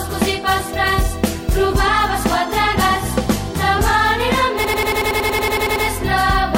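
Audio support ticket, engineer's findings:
System hang loop, 4.64–5.85 s. Probable component: driver or host stalled while the audio device kept replaying its ring buffer. A 92.9 ms segment repeats exactly 13 times at 10.8 Hz, which fits a 4096-sample buffer. Heard as a machine-gun stutter, not a steady buzz. Little or no audio appears lost once playback resumes.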